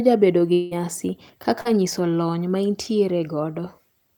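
From 0.53 to 0.73 s the speech turns into a fading buzzy smear with no silence, likely a long network dropout whose missing 180 ms the receiver filled by extending the last sound. At 1.61 to 1.67 s, just before "nyiso lony", a brief wobble marks a short concealed packet loss: about 40 ms never arrived and was patched from the preceding audio.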